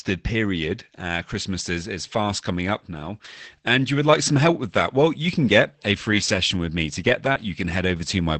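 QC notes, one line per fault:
6.12 to 8.05 s, lost packet rebuilt from error correction: sixteen separate 20 ms stretches, spaced roughly 60 to 260 ms apart, sound grainier and noisier than the surrounding speech, but there are no gaps. Each lost packet was replaced by the low-bitrate redundant copy carried in the following Opus packet, so the audio runs on continuously. The roughness comes from that copy's coarser coding, on top of the coding noise of the 20 kbps call path.
7.32 to 7.37 s, short concealed packet loss: about 20 ms of audio arrived too late for the decoder and was filled with 24 ms of extrapolated sound before a crossfade back into the real signal. The decoder carried the preceding sound forward, following its pitch where it was voiced and using shaped noise where it was not, which produces a brief smear or wobble. This hole falls inside the run of rebuilt packets, and its last 20 ms overlaps a redundant copy.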